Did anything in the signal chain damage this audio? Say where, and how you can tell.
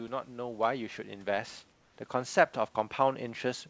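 Yes. The first fault is automatic gain rising, and it sits in the call processing. From 0.05 s to the end of the clip, the level climbs steadily. The speech and the room noise, which sits about 38 dB below the speech, swell together. That shared rise is the tell. A talker getting louder would not lift the background too. The gain control judged the input too quiet and kept raising its gain across the whole clip.

The second fault is comfort noise in place of the background, between 1.72 and 1.98 s, lasting 260 ms. In that pause the real room background, about 37 dB below the loud parts, vanishes. A steady, featureless hiss replaces it, about 4 dB quieter, until the speech returns. The likely cause is discontinuous transmission. The sender stopped sending during the pause, and the receiver filled the gap with synthetic noise. The call codec path shows its expected limit, with nothing above 8 kHz.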